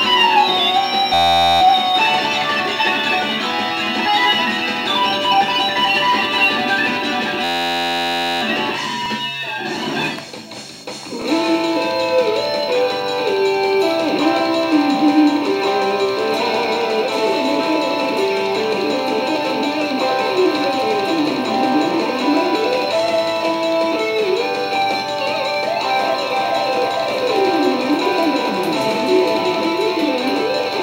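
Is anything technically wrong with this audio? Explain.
Yes. There are two system hang loops, at 1.14 to 1.61 s and 7.44 to 8.42 s. The system stalled while the audio hardware kept replaying one 11.61 ms buffer, which fits a 512-sample buffer. That single fragment repeats exactly, producing a steady 86.1 Hz buzz.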